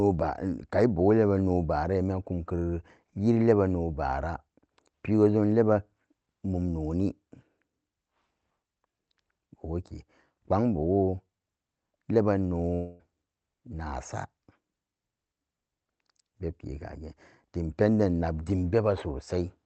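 At 12.74 s the speech drops out and a smeared, buzzy continuation of the last sound fills the gap until about 13.01 s, roughly a quarter of a second. That's most likely a long network dropout: nothing arrived, so the receiver stretched out what it had, and with a gap this short the filler covers all of it with no silence. The audio resumes afterwards without the lost piece, still band-limited to about 8 kHz, as you'd expect from an Opus call path.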